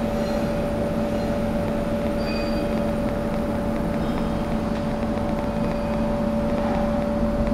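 From 1.68 s to 7.48 s, a train of clicks ticks over the sound at about five per second, unevenly spaced, roughly 10 dB above it, likely interference injecting repeated pulses.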